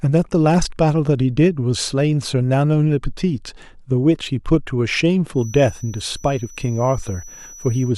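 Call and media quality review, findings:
Feedback whistle, 5.31 s to 7.97 s (clip end). Speaker-to-mic acoustic loop, likely at edge of instability; gain holds one frequency without runaway. Thin steady 5.9 kHz tone, roughly 25 dB under speech, level slowly swelling and fading.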